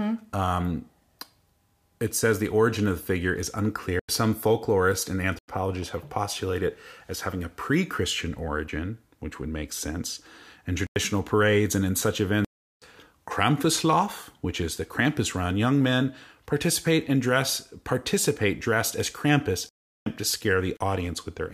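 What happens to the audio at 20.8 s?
A block of samples was zeroed from 20.77 to 20.81 s, a block of digital silence about 36 ms long, cutting in and out abruptly with no fade.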